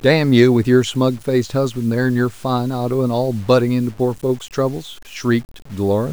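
From start to finish the speech carries a grainy, rasping distortion that tracks the signal, with the error sitting roughly 30 dB below the level of the speech. Quiet passages and decaying syllables turn gritty and sputter rather than fading smoothly. This is low bit depth without dither, the likely result of truncating samples to a coarse resolution with no noise added to decorrelate the rounding error, consistent with about 7 bits.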